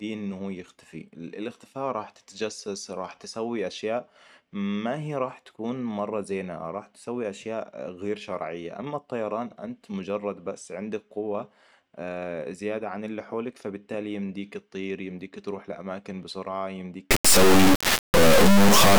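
At 17.11 s, just after "يمديك تروح لأماكن بسرعة", the speech gives way to an integer-read-as-float fault until 18.99 s. The 32-bit integer samples are taken as 32-bit float values. Output jumps between silence and clipping, heard as a harsh, loud buzzing square wave.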